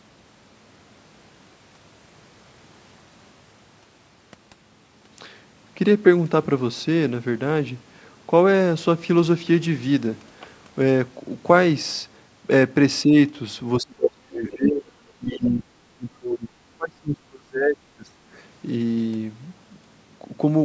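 From 13.05 s, the echo canceller likely could not separate overlapping talk from its own loudspeaker echo and turned everything down. This is speech suppressed in double talk. A slight dip of about 5 dB runs from 13.05 to 13.14 s. Deeper cuts follow: about 25 dB from 13.81 to 14.86 s, about 35 dB from 15.18 to 16.49 s, and about 30 dB from 16.76 to 18.2 s. During these the talker fades and breaks up.

Within the 35 dB cut, from 15.45 to 15.49 s, the canceller likely failed to remove part of the loudspeaker signal from the microphone, so the other side's voice leaks through. It is a brief, faint scrap of a second voice, about 25 dB below the talker.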